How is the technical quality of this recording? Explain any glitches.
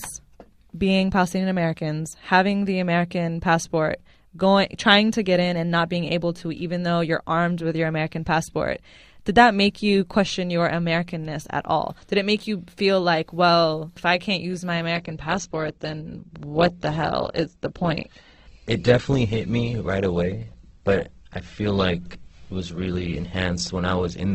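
The recording has one clear glitch, a sudden quality drop partway through the speech. Adaptive stream at a lower bitrate, from 14.96 s to the end, right after "I can't use my": the stream switched to a lower-bitrate version, the kind of change a slowing connection forces. With fewer bits to spend, the encoder discards the treble, leaving nothing above 8.2 kHz, and the speech turns dull, with rising codec artefacts. The change is abrupt but leaves no gap, and it fits a step down from roughly 64 to 12 kbit/s Opus.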